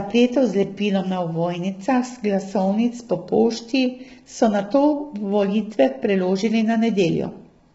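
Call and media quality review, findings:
Rough, grainy speech throughout, noise smeared between harmonics, nothing above 7.7 kHz. Likely low-delay AAC compression (AAC-ELD), sounding starved, around 16 kbps. Its short frames resolve pitch harmonics poorly and eat bits fast.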